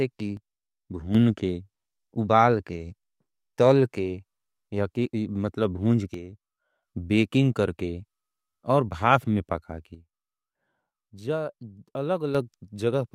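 One channel drops out in this speech recording three times: from 0.37 to 1.15 s, from 6.14 to 6.83 s, and from 9.95 to 12.35 s. In each span the sound abruptly falls by about 6 dB and then returns to full level. The likely cause is one stereo channel going silent. When the pair is summed to mono, whatever both channels shared is left at half strength, and anything carried only by the missing side vanishes.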